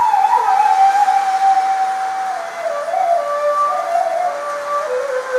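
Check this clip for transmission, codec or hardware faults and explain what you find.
Nothing in the transmission, codec or hardware chain stands out here; the audio comes through without any audible trouble.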